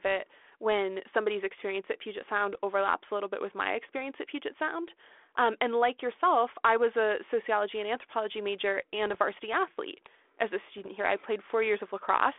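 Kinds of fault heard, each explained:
Bit errors on an ADPCM link: at 2.52, 9.07 and 10.78 s, flipped bits derail the decoder's step size and predictor, leaving rough pops and level jumps.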